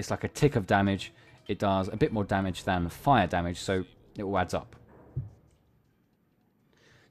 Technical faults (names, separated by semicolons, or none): none